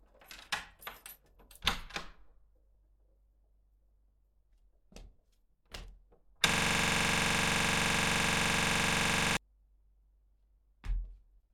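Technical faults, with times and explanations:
6.49–9.37 s: system hang loop. The system froze, replaying one 43 ms slice 67 times. That makes a rattling buzz near 23.4 Hz, which fits a 2048-sample buffer.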